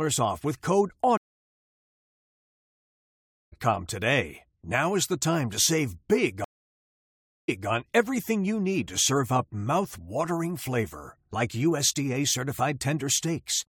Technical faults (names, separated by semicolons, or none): stream reconnect